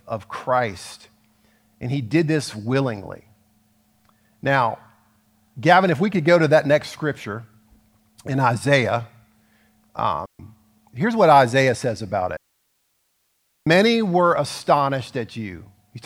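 The digital wireless link in this speech clip twice loses too much data, so the receiver mutes in a digital wireless dropout: clean near-silent holes with no noise burst, about 134 ms at 10.26 to 10.39 s and 1.3 s at 12.37 to 13.67 s.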